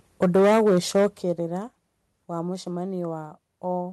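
Speech whose loudest stretch, from 0.22 to 1.06 s, carries microphone overload: peaks drive about 10 dB past the converter's ceiling, flattening the tops of roughly 15 percent of samples into a harsh, crackling edge, the likely cause being input volume set too high. Unlike codec distortion, this grit follows the level and is tied to the biggest syllables. It is not spread evenly or smeared in time. Two abrupt level drops follow: about 2 dB at 0.23 s, just as the distortion begins, and about 9 dB at 1.23 s, shortly after it ends. These are a microphone volume stepped down, likely by the call software reacting to the overload. They are instant, single-step falls hitting voice and background together, not the gradual pumping of a compressor or automatic gain control. The call codec's upper limit near 12 kHz can be heard behind both.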